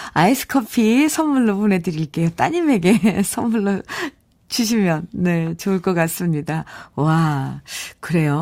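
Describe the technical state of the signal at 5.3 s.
At 5.3 s the speech signal is intact, with no dropout, clipping, glitch or other audible fault at that moment.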